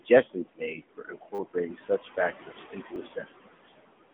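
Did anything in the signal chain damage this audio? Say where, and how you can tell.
Yes. In call processing, the noise suppressor pulls the room noise down by about 18 dB between phrases and lets it back up under speech throughout.

At the codec stage, the speech is buzzy and synthetic, with nothing above 3.7 kHz and a 200 Hz to 3.5 kHz line band. That plainly audible damage fits AMR narrowband mobile coding at around 10.2 kbps.

The same suppressor also cuts speech between 0.34 and 3.26 s. Quiet consonants and word endings drop by as much as about 21 dB, roughly a second in total, because they were mistaken for noise.

At the driver or buffer stage, a repeated buffer causes a short buzzing stutter from 1.35 to 1.39 s, where one 10 ms piece plays four extra times. A single repeat at 2.96 s gives a click. Both fit a 10 ms buffer being replayed when new audio arrived late.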